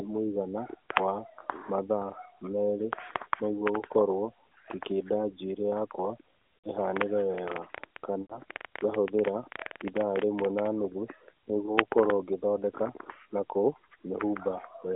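From 6.59 to 6.69 s the sound briefly smears and dips, then returns slightly rough. These are lost AMR speech frames. About 60 ms of frames failed their check, and the narrowband decoder filled the gap by repeating its last good pitch and vocal-tract settings at falling gain.

From 7.38 to 10.67 s a train of clicks ticks over everything, including pauses. There are roughly 40 similar pops at an uneven pace, averaging about 11 per second, with peaks about 5 dB above the signal. This points to interference from nearby equipment or a struggling interface, likely the cause.

Within that stretch, from 8.22 to 8.41 s, a longer frame loss of 80 ms draws the sound out and lets it fade toward silence before it comes back weak. A last, short loss from 11.66 to 11.78 s covers 20 ms and gives a quick warble. Throughout, the AMR narrowband codec keeps the band within about 300 Hz to 3.6 kHz, with the light coding buzz expected at a rate that fits 12.2 kbps.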